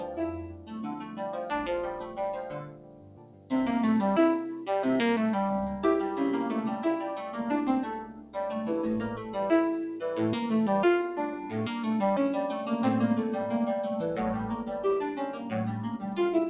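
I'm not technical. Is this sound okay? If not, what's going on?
No. A noise suppressor built for speech was left on, so it treats steady parts of this sound as noise, making the level pump and thin out all the way through.

The noise suppressor cut sound more heavily, pulling it noticeably quieter, from 0 to 1.5 s, 1.9 to 2.2 s, 2.4 to 3.5 s, 8.0 to 8.4 s, 9.1 to 9.4 s, 15.3 to 15.5 s and 15.9 to 16.2 s. It came through a phone-style call line, which leaves nothing above 4 kHz and gives it a narrow, muffled top end.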